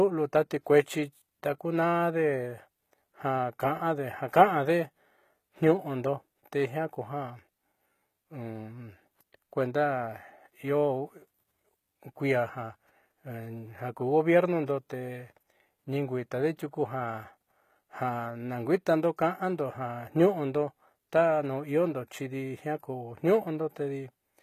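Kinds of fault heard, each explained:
HE-AAC compression: throughout, treble likely rebuilt by spectral band replication from copied lower bands; s sounds turn plainly gritty, nothing above 14.8 kHz, fitting roughly 20 kbps.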